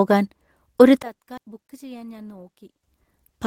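A short speech clip with three faults in its middle section. From 1.02 s to 2.83 s the speech drops by about 23 dB, with the centred voice nearly gone. What remains is only the faint difference between the two channels. The likely cause is one channel inverted: with one side's polarity reversed, the content common to both channels cancels when the stereo pair is summed to mono.

Within that stretch, a skip ahead occurs at 1.37 to 1.39 s. Around 0.7 s of audio is missing, and playback jumps forward with no gap and nothing filled in. The sound before and after the jump is spliced almost directly. This fits the receiver discarding queued audio to cut its delay by roughly that amount.

From 1.95 s to 2.25 s there is a jitter buffer speed-up. The speech runs at about 111% of normal speed but keeps its pitch, so it sounds briefly hurried. The receiver removed some 40 ms in total by cutting out short pitch-period-sized pieces one after another. 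This pulls the backed-up buffer down toward its target depth.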